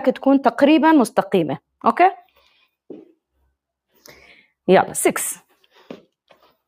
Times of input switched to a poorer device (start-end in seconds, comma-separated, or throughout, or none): none